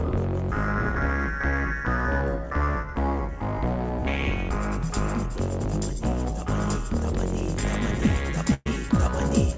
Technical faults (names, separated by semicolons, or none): burst of packet loss